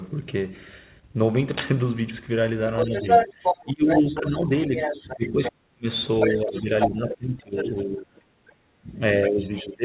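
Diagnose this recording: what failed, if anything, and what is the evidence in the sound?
Cable scratch noise, 1.47 to 1.71 s: a quarter-second burst of dense, ragged scratching sits over the speech at roughly the speech's own level. This is an analogue wiring fault. A worn cable or connector was likely moved, and its contact resistance fluctuated rapidly, adding the noise.

Other side's voice leaking through, 2.77 to 5.52 s and 6.21 to 7.16 s: a second voice is heard at about the talker's level. Weaker scraps follow at 7.52 to 7.84 s, 8.47 to 8.54 s and 9.26 to 9.68 s, the faintest barely audible. This happens in call processing, where loudspeaker playback of the far end was likely not fully removed by the echo canceller.

Speech suppressed in double talk, 2.85 to 5.87 s, 6.39 to 8.87 s and 9.28 s to the end: the talker drops in level while the second voice is present, by up to about 30 dB, then about 20 dB and about 10 dB. 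In call processing, the echo canceller likely could not separate the talker from the echo, so it attenuated both.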